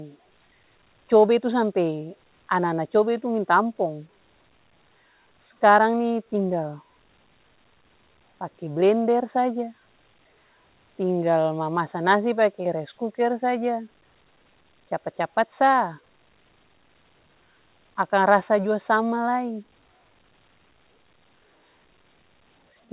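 No faults can be heard anywhere in this recording.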